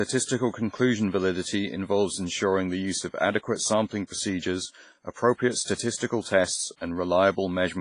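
A speech clip with heavy, washy, ringing codec damage throughout, likely from WMA compression at a low bitrate around 24 kbps; the spectrogram shows nothing above 10.5 kHz and gappy, smeared bands. At 6.76–6.81 s, pre-echo puts about 49 ms of hiss before an attack; the waveform shows a noise smear leading into the onset.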